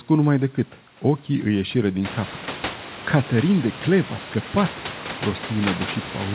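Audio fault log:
Nothing to log here: the room noise coming up by about 18 dB around 2 s and the G.711 A-law call path topping out at 4 kHz are both just how this setup normally sounds.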